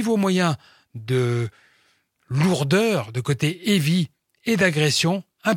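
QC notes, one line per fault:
Nothing to flag on this speech clip; there's not a single problem to log here.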